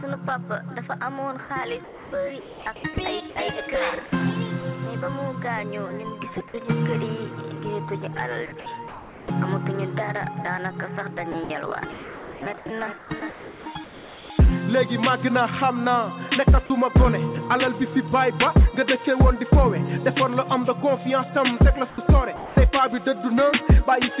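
The audio comes through a narrowband call path with nothing above 4 kHz, consistent with G.711 A-law at 64 kbps. From 1.84 to 2.96 s the real background disappears and a flat, featureless hiss takes its place for about 640 ms in total. This is comfort noise in place of the background, likely from discontinuous transmission: the sender stops sending during a pause and the receiver synthesizes noise roughly matched to the background's spectrum, so the texture of the real ambience vanishes.

At 2.94 s, right as that stretch ends, a 20 ms sliver of sound is lost and replaced by the same synthetic noise. This is sound dropped by the voice detector: the sound was likely quiet enough to be mistaken for background, so that instant never left the sender and returns only once detection catches up.

Three stretches sound choppy, with the sound breaking up. The first runs from 8.6 to 9.3 s, with about 480 ms replaced. 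The longest runs from 11.32 to 14.3 s, where about 1.62 s is lost. The last runs from 21.9 to 22.56 s, with about 280 ms replaced. This is sound chopped by the voice detector: its decision likely toggled repeatedly over each span, so quieter portions were swapped for comfort noise in several holes rather than one continuous gap.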